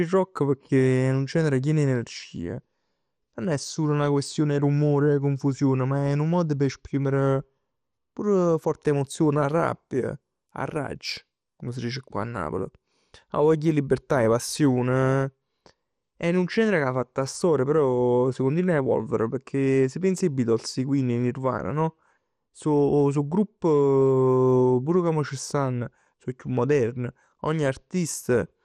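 Speech throughout carries plainly audible MP2 compression damage: dull, gurgling, granular texture with upper sub-bands flickering on and off and nothing above 14.3 kHz. That band-switching, rather than MP3-style swirl, points to likely Layer II coding at a low rate near 64 kbps.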